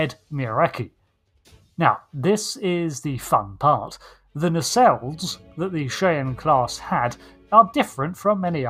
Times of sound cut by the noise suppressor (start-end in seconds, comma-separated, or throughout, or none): 1.35-1.74, 7.31-7.51